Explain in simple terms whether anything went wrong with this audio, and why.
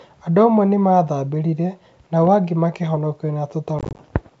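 From 3.79 to 4.06 s there's packet loss on an ADPCM call. About ten tiny chunks drop to silence, and the decoder briefly loses step after each gap.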